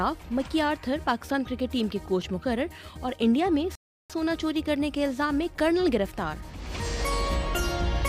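At 3.75 s the sound stops dead and stays silent until 4.10 s, a rebuffering stall: playback ran out of downloaded audio and waited for more to arrive. When it resumes, it picks up exactly where it broke off, so nothing is skipped, but about 0.34 s of dead air is inserted. The waveform shows a flat line across that span, and the spectrogram shows a clean vertical gap with the content continuing seamlessly across it.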